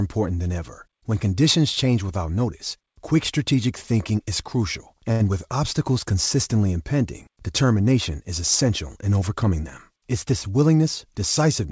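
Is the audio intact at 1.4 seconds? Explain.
Yes, the speech at 1.4 seconds is intact, with no dropout or glitch, only the G.722 call path's ordinary band limit that leaves nothing above 8 kHz.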